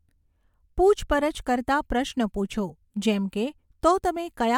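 No technical faults can be heard in this speech recording; nothing in the signal needs attention.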